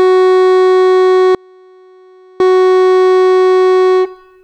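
Audio dropout to a faint residue from 1.35 to 2.40 s in this music clip: the signal cuts out abruptly for about 1.05 s, leaving only a faint leak roughly 35 dB below normal level, likely a brief signal loss upstream while the path downstream stayed live.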